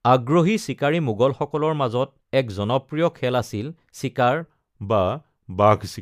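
A section at the wrong speed runs from 4.41 s to the end, likely a clock mismatch: playback at 0.893x drops the speech about two semitones, slower and deeper.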